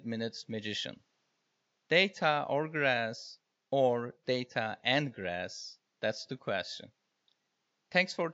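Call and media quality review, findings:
No faults found in this speech recording. Room noise is present well under the speech, at about 49 dB below it.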